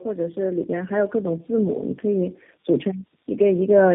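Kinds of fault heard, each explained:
Tandem speech coding: The speech passed through several low-rate speech coders in series, each re-encoding the previous one's decoded output, so the damage compounds. The result is rough, muffled and warbly, and the sound suggests three speech codecs in a row, ending in something like G.729A. On a spectrogram the content stops sharply at about 3.8 kHz, and the harmonics look smeared and grainy rather than cleanly striated.
Automatic gain rising: Early in the clip, from 0.14 s to 1.41 s, a gain control judges the input too quiet and raises the level gradually, by about 5 dB. The speech and the background swell together over that stretch, so it sounds like a slow fade-up rather than someone speaking louder. On a waveform the envelope widens steadily across that second and a quarter, and on a spectrogram the whole band brightens evenly across that stretch.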